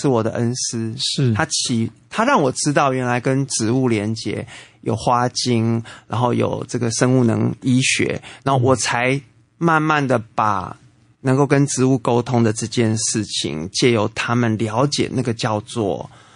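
From start to finish the speech sounds watery and swirly, with chirpy s sounds, likely MP3 compression starved of bits, which fits roughly 40 kbps.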